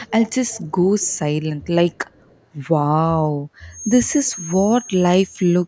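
A faint copy of the speech trails it by about 0.27 s at 0.0–0.68 s, 1.01–1.19 s, 1.62–1.66 s and 1.92–2.4 s. This echo leak is loudest at the start and barely audible later, likely from a loudspeaker echo canceller failing to remove its pickup.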